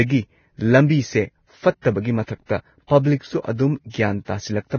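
Right through the speech there's heavy codec damage, likely Vorbis compression: nothing above 6.5 kHz and grainy, hissy treble, which points to a very low bitrate, around 18 kbps. At 1.81 to 1.85 s you get pre-echo, a 34 ms smear of hiss before an attack, where the block's quantisation noise leaked into the quiet lead-in.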